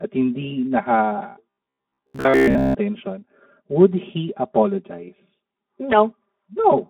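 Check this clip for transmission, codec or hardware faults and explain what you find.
Three faults are audible: comb filtering from a channel delay and Speex coding damage throughout, plus a stretch of robotic buzz.

Channel delay (comb filtering) runs the whole clip. One channel arrives about 5 ms after the other, and summing them to mono cancels content at evenly spaced frequencies, the first near 100 Hz and then at regular intervals above it. The speech sounds hollow and phasey, with fixed notches that never move. That fixed position separates it from a flanger or moving phase fault, where the notches sweep.

Speex codec damage is also present from start to end. The band runs from roughly 200 Hz to 3.5 kHz, and the degree of damage fits a low-to-middle rate around 11 kbps. With few bits for the excitation, the speech sounds noisy and hoarse, with plainly audible coding grit. A simple band-limited phone line would sound dull but clean. 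The rough, buzzy texture is what points to a CELP codec.

Robotic sound from repeated short buffers occurs from 1.50 to 2.75 s. The speech turns into a rigid, metallic buzz at about 67 Hz, which fits a repeated segment roughly 15 ms long. The likely cause is late-arriving audio, with the software filling the gaps by replaying the last buffer so that most of the real sound in that stretch is skipped. Its constant pitch sets it apart from the codec's general roughness, which does not impose any tone.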